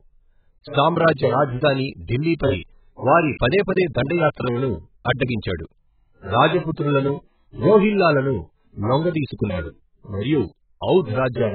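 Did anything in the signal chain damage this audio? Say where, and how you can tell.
Yes, at the codec stage, across the whole speech clip. Nothing reaches above 4.7 kHz, so the top octaves are simply missing. The sound is dull and smeared throughout, and the damage is heavy. The likely cause is AAC compression, AAC-LC at a very low bitrate, around 8 kbps. With so few bits per frame, the encoder drops its cut-off sharply and quantises the remaining frequency lines coarsely, blurring detail in time and spectrum.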